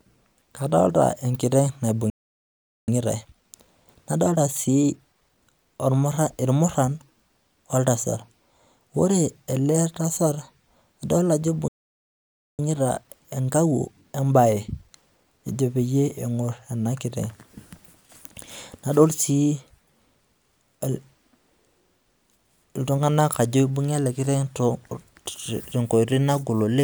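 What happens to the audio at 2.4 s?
A playback stall runs from 2.10 to 2.88 s: the speech cuts off mid-flow into silence for about 0.78 s, then carries on. The likely cause is the player running out of buffered data, or its audio thread being blocked, until it recovered.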